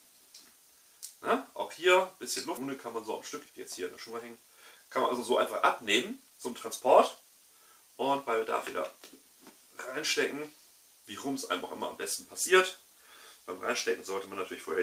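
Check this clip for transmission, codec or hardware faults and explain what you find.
Two transmission faults are audible: one skip ahead early on, followed by three bursts of jitter buffer speed-up.

At 2.57 to 2.59 s there is a skip ahead. About a second and a half of audio is discarded, probably by an overflowing jitter buffer. The two sides join with no silence, which sets it apart from a dropout, where a gap or fill would be heard.

Jitter buffer speed-up follows at 3.44 to 3.56 s (167% speed), 3.97 to 5.19 s (117%) and 6.10 to 7.30 s (109%). The receiver trims small pitch-period slices to shrink the built-up delay. The sound hurries but keeps its pitch, unlike a resampling error, which would raise the pitch.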